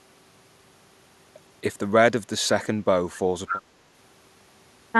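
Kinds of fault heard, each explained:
Echo leak: a brief delayed copy of the speech, about 10 dB quieter, surfaces from 3.47 to 3.62 s, trailing by 254 ms. It is likely a far-end loudspeaker's echo escaping cancellation. Unlike room reverberation's smooth tail, this is one distinct repeat.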